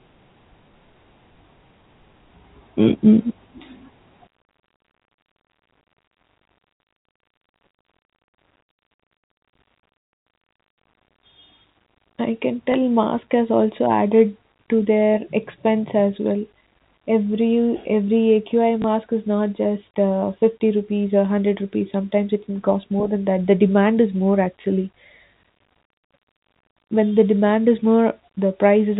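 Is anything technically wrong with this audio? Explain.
Yes. There are two kinds of fault. The audio is speech carried over telephone-band G.711 coding, so nothing above 4 kHz is heard.

Sudden gain jump: at 4.27 s the level drops by about 12 dB in one step and stays down to the end. Speech and background noise fall together, with no fade. A click may mark the moment. The likely cause is a gain setting or bit shift applied from one sample to the next without a ramp.

Packet loss with last packet repeated: brief dropouts occur at 12.72 s, 18.82 s and 24.62 s, each lasting 20 ms. Each one fits a single lost packet. The receiver fills the gap by playing the previous 20 ms again. The result is a small blip at each of the three times.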